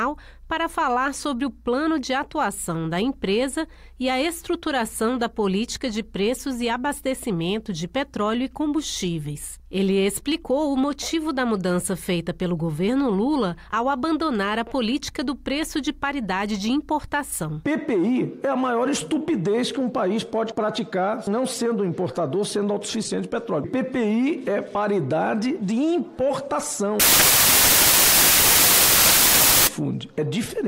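From 27.00 to 29.67 s, the reader assembles each sample from the wrong bytes, either shifted by one or in swapped order, so the rapidly varying low bits land in the most significant positions. The result is a burst of loud, harsh broadband noise, close to white on loud sounds.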